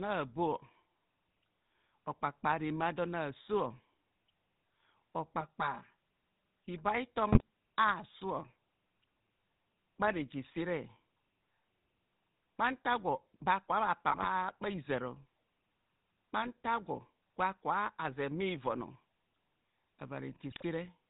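From the start, the whole speech track has that GSM full-rate codec character, and it's plainly audible. The coder keeps a vocal-tract filter and rebuilds the excitation from a thinned-out pulse train, so everything sounds buzzy and gravelly, and nothing survives above 4 kHz. That dull, rough texture fits the old 13 kbps full-rate coder, and it sits under the voice for the entire clip.

On top of that come three bursts of GSM bit errors, each a short stretch where corrupted bits reached the decoder: 7.32 to 7.42 s, 14.08 to 14.29 s, and 20.50 to 20.63 s. Bad filter, pitch or gain values throw the spectrum sideways or spike the level, so each burst breaks into squawks, pops and gargling. The middle one, about 0.2 s long, is the longest, and it sounds like about ten mangled 20 ms frames.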